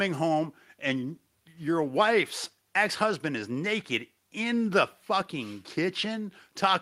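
Speech with no audible faults.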